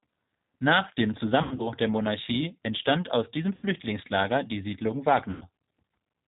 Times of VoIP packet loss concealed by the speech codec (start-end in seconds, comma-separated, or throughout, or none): 1.43-1.69, 3.55-3.66, 5.31-5.46